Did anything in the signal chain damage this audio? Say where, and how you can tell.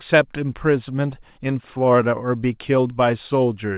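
Yes. The damage sits between the two ends of the call, in their clocks. There is clock drift between sender and receiver. The sender's clock runs about 4 percent fast. Its samples arrive quicker than the receiver plays them. The jitter buffer keeps filling. The receiver has to throw audio away to keep latency bounded. You hear this as small timing hiccups spread through the whole speech clip at uneven gaps. The band stops at 4 kHz, which fits the G.711 mu-law path. That limit is not the fault.

The second fault is the repeated timing corrections in the jitter buffer stage. They run from 0.13 s to 3.74 s. Every edit goes the same way. The receiver cuts short pieces out of the stream rather than repeating them. The net effect is playback at 104 percent speed. Each cut is tiny. The spacing between cuts is irregular. That uneven spacing marks an adaptive buffer chasing a fast sender.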